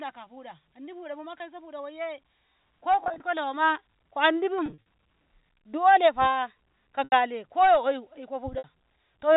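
Packet loss with pitch repetition interrupts this speech at 1.38–1.40, 3.04–3.20, 4.66–4.78 (just after "nawama ko"), 7.04–7.12 (after "dolefa ko") and 8.58–8.64 s (after "oyu ko"). Each time the receiver bridges missing audio by repeating the last pitch period, giving a brief held, buzzy sound in the short gaps, while the longer gaps at 7.04 and 8.58 s fade into silence before the speech returns. The losses total 20 to 120 ms and are scattered over up to 200 ms at 3.04 and 4.66 s, which fits 20 ms packets. The telephone-band G.711 A-law coding passes nothing above 4 kHz.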